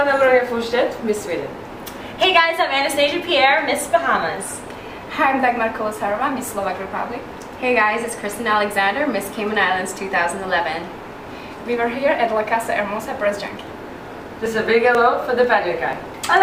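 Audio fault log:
13.48 to 15.93 s: periodic USB or driver dropouts. Every 0.49 s, around ten milliseconds of audio is skipped outright. The sound jumps ahead at each gap, leaving an abrupt splice. About seven evenly spaced ticks result, pointing to a repeatedly stalled bus or driver.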